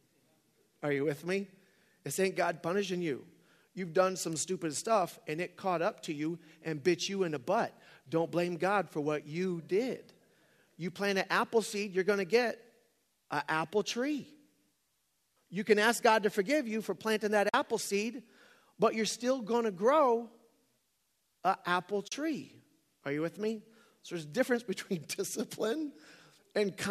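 AAC frame loss with muting at 17.49 s, between "you for planting that" and "seed but you're still", and at 22.08 s after "an apple", leaves soft-edged silent holes of 50 ms and 40 ms in this speech, where the decoder zeroed the missing frames and the overlapping windows faded the sound smoothly out and back in. The light roughness of the speech is likely due to low-delay AAC compression.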